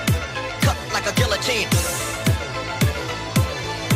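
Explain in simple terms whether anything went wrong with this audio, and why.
Nothing went wrong; no faults can be heard anywhere.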